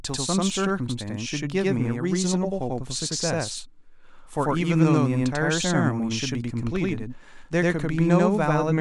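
Right from the start, and all the way through, there's a channel delay doubling. One side is arriving about 93 ms behind the other, which fits a 4096-sample buffer sitting in just one path. Once the two get folded to mono you hear the speech twice at equal level: a tight slap echo trailing every syllable, giving a double-tracked feel rather than any real room sound.

From about 0.19 s until 8.71 s there's also a steady stream of faint ticks, roughly ten a second, which puts it at something like a hundred over that stretch. That's the signature of clock slip clicks. The likely cause is two devices free-running on separate clocks about 200 ppm apart, so a single sample gets dropped or repeated each time the drift adds up to a whole one. It reads as a soft rattle, clearest on louder voiced bits.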